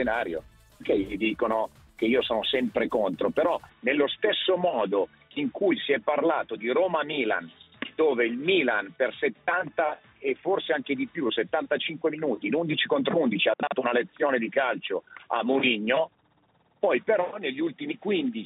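At 3.69 s the sound abruptly turns dull and boxy, with nothing above 3.8 kHz, and stays that way to the end. There is no gap and no level jump, only a faint new noise floor. The likely cause is an input switched to a poorer device.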